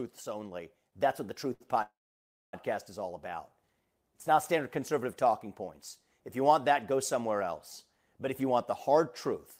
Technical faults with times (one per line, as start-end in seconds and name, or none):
1.53-1.62 short stall from a late packet
1.82-2.55 call audio freeze
8.31-9.35 jitter buffer speed-up